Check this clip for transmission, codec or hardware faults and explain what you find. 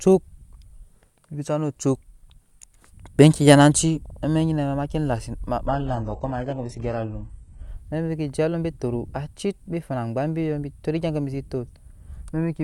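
One transmission fault is audible in the speech. From 5.67 to 7.67 s the adaptive stream drops to a lower bitrate, with no gap: the connection slowed, so a far leaner encoding played, which points to a switch from roughly 96 kbit/s AAC to about 12 kbit/s HE-AAC. Codec artefacts rise, with nothing above 15 kHz. A spectrogram shows an abrupt two-second block of thinned, patchy high band, while the waveform stays continuous.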